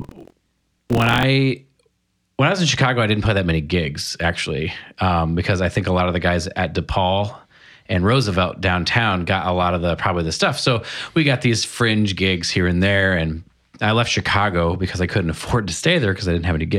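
A robotic rattle at about 43 Hz runs through the speech from 0.0 to 1.25 s: buffer tearing, where each buffer, which fits a 1024-sample size, carries roughly a sixth of audio from about 70 ms earlier.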